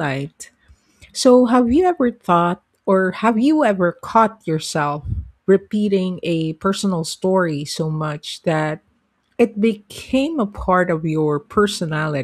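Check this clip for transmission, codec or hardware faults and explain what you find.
The speech signal reaches the listener intact, with nothing in the transmission path, encoding or playback hardware leaving an audible mark on it.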